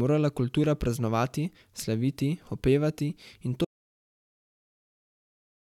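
At 3.65 s, just after "praznovati slaviti opevati in", an audio dropout to silence cuts the speech to silence through the end, likely from lost input.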